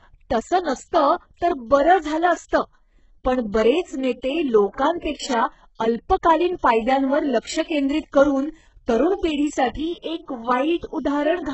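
Throughout the speech, heavy codec damage is audible, with nothing above 8 kHz. The likely cause is HE-AAC compression at a very low bitrate, around 8 kbps. Treble is rebuilt from copied lower bands, so harmonics misalign and s sounds turn gritty, metallic or lispy.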